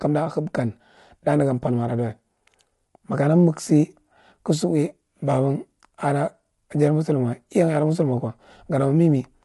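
From start to finish the speech carries plainly audible coding damage: a rough, grainy texture with noise filling the gaps between pitch harmonics, and nothing above about 11.6 kHz. This is likely low-delay AAC compression of the AAC-ELD kind used for video calls. Its short frames resolve harmonics coarsely and spend bits inefficiently, and the damage fits a bitrate around 32 kbps, where the band limit and smeared harmonic structure become obvious.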